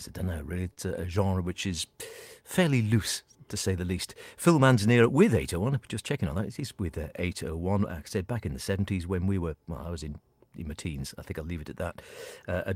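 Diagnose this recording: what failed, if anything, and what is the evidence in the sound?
A short stall from a late packet, at the network and jitter-buffer stage, occurs at 0.73 to 0.80 s. The speech holds one sound with a faint buzz or dip, stretched by 35 ms, then resumes exactly where it paused. Unlike packet loss, nothing is skipped; everything afterwards simply runs 35 ms later.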